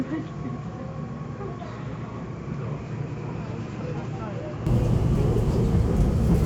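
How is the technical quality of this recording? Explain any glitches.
The recording has one clear fault: the first part sounds dull and noticeably quieter before the sound abruptly opens up.

From the start to 4.67 s, the audio is muffled and boxy, with nothing above 7.4 kHz, and it sits about 10 dB lower, with a faint added noise floor roughly 55 dB below the signal. At 4.67 s it brightens and jumps in level with no silence at the change. The likely cause is an input switched to a poorer device: a narrower-band device with its own level and noise was in use, and the system then moved back to the better input.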